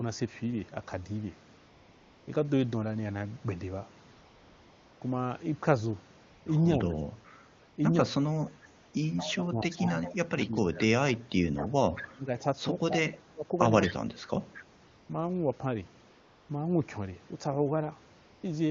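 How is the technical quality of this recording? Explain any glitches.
It's a wideband AMR phone call, and the codec itself sounds clean. The glitches come from silence handling and echo control.

AMR comfort noise appears at 1.57–2.27, 4.11–5.01, 6.23–6.45, 7.59–7.77, 8.79–8.93, 14.87–15.09, 16.09–16.49 and 18.19–18.43 s. In those pauses the phone stopped sending speech frames, so the receiver generated smooth synthetic hiss in place of the real background. You hear it flick in and out.

Speech suppressed in double talk hits 6.91–7.20, 9.28–12.29 and 12.89–13.97 s. The voice ducks by as much as around 25 dB in patches, and it's most drawn-out in the middle stretch. The likely cause is the echo canceller clamping down while both ends talked at once.

Echo leak shows up at 9.17–10.49, 11.6–12.06, 13.83–13.93 and 14.53–14.64 s. A faint copy of the voice comes back about 225 ms late, roughly 10 to 20 dB under the direct speech. 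It's likely residual loudspeaker pickup that the far end's canceller didn't fully remove.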